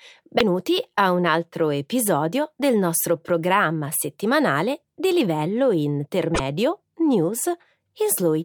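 At 0.35 to 0.41 s and 6.31 to 6.40 s, damaged data in a compressed stream makes the decoder lose frame sync, giving a brief chirp, squawk, click or short hole.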